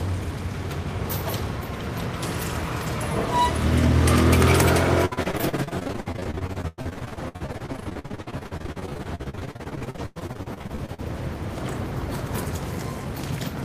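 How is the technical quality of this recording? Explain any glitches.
The middle stretch has a real problem: repeated packet loss (robotic sound) from 5.05 to 11.0 s. Dozens of short dropouts, the longest 101 ms, get patched by stretching the last bit of audio. About 41% is filler, so it sounds choppy.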